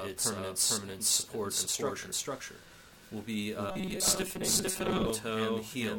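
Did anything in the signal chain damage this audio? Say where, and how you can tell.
Yes. A doubled audio track runs through the whole clip: a second full-band copy, about as loud as the original, trails it by roughly half a second with no decay or room colour. That's likely a slower second capture path or an edit holding two copies out of step.

From 3.69 to 5.10 s there's robotic sound from repeated short buffers, a rigid metallic buzz at 188 Hz over the audio. The likely cause is the driver or buffer stage repeating about 5.3 ms chunks while about half the real audio gets skipped.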